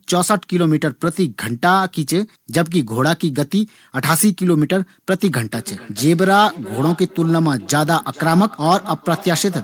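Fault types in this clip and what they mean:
Feedback echo between two devices: from 5.25 s to the end, speech returns roughly every 400 ms, peaking about 18 dB below the voice, as one device's microphone recaptures the other's playback.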